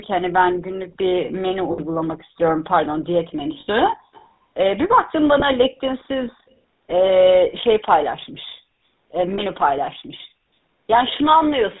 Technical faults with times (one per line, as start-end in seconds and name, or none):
0.00-11.80 GSM full-rate codec
1.72-1.80 lost GSM frames
3.60-3.69 lost GSM frames
4.13-4.28 echo leak
5.40-5.43 lost GSM frames
7.06-7.10 lost GSM frames
9.34-9.43 lost GSM frames
11.08-11.12 echo leak